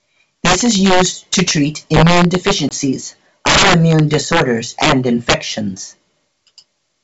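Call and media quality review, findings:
Integer overflow: violent cracks on loud speech peaks, harsher than clipping, at 0.45–1.51 s, 1.94–2.51 s, 3.46–4.42 s, 4.82–4.92 s and 5.29–5.34 s. Gain or mixing stage overdriven by about 5 to 13 dB. Peaks wrap to opposite sign instead of saturating.

Packet loss on an ADPCM call: hard-edged 20 ms gap at 2.69–2.73 s, roughly a couple of packets, with some distortion on resumption. Decoder predictor and step size lost sync with sender. Brief misadaptation before recovery. G.722 wideband path clear, faint or no coding damage.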